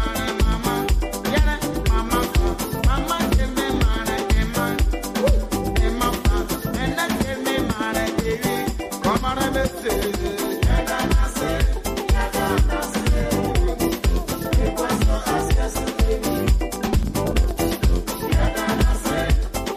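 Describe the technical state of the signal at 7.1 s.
At 7.1 s the signal is in a short burst of processor overload crackle, running from 7.01 to 7.16 s. The processor misses several small buffer deadlines in a row, roughly 5 ms each. Each missed buffer is skipped, leaving a hard-edged gap. Together they sound like gritty, tearing crackle.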